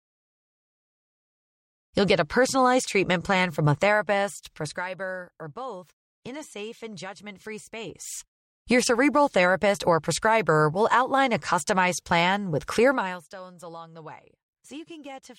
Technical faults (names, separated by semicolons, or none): none